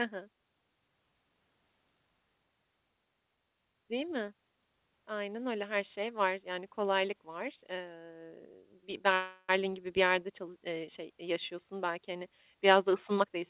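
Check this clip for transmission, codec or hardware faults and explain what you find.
Two faults turn up in the speech, a call audio freeze and a jitter buffer speed-up. Both are heard over a narrowband call sound with nothing above 4 kHz, which fits a G.711 mu-law codec at 64 kbps.

From 9.14 to 9.50 s there is a call audio freeze, just before "gibi bir". Packets were likely held up in transit, so the jitter buffer ran dry. The receiver stretched the last sound into a fading buzz or hiss for about 0.34 s. Nothing is lost. The speech resumes where it stopped, but now runs 0.34 s later.

From 13.17 to 13.37 s comes a jitter buffer speed-up. The buffer held more audio than its target. To shed the extra delay, the receiver cut short pitch-period slices, one after another. About a tenth of a second was removed. The speech plays at 149% speed but keeps its pitch. It sounds briefly rushed.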